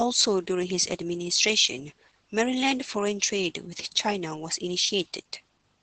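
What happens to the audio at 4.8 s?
At 4.8 s the speech sounds muffled and slightly hoarse, with nothing above about 8.8 kHz. This is Opus voice compression throughout the clip: SILK's coarse low-rate coding, which fits roughly 12 kbps.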